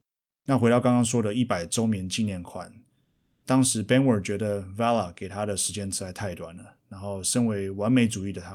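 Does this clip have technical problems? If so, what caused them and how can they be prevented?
Yes. At 0.21–0.45 s and 3.03–3.43 s the real background gives way to a flat, featureless hiss, about 25 dB quieter in the first gap and about 2 dB in the second. This is comfort noise in place of the background, likely from discontinuous transmission pausing the stream. Disabling DTX on the sender prevents it.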